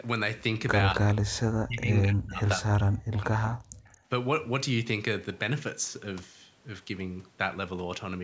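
From 0.94 to 1.06 s, and again from 1.5 to 3.65 s, the talker dips by roughly 25 dB, then around 40 dB, which is likely speech suppressed in double talk. Then from 3.93 to 4.07 s the room sound briefly drops by about 14 dB, background gated by the echo canceller clamping the mic while the far end plays.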